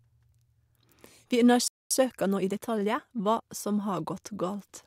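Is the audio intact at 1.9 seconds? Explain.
No. A playback stall runs from 1.68 to 1.91 s, so the speech drops out mid-flow for about 0.23 s, most likely because the player ran short of data or its thread was blocked. The waveform falls to a flat line and the spectrogram shows a blank vertical gap.

From 1.91 to 3.43 s, time-compressed catch-up follows. The player trims its backlog by splicing out short pieces and cross-fading the joins, so the speech runs about 1.15 times fast at normal pitch. Harmonics stay level on a spectrogram, but syllables look squeezed, with small seams.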